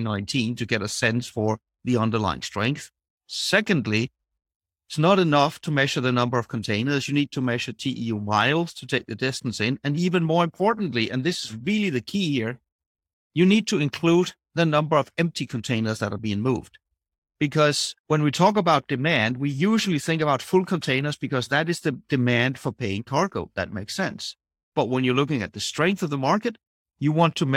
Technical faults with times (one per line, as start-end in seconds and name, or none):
none